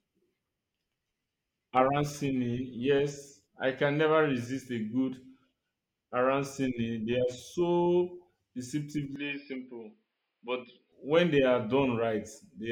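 From 9.16 to 10.92 s the speech turns dull and boxy, losing everything above 5.1 kHz, dropping a few decibels and picking up a faint new noise floor. This is likely an input switched to a poorer device, because a plain bandwidth cut wouldn't also shift the level and the background noise.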